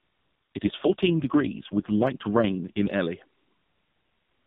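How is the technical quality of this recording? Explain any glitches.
The speech has one glitch, heard against the lightly coded, 4 kHz-limited sound of the AMR narrowband mobile codec. An AMR rate drop runs from 0.55 to 2.95 s. The codec switches to a leaner mode, consistent with a step from 12.2 to 4.75 kbps. The voice turns rougher and more synthetic, with no gap and no change in bandwidth, then recovers.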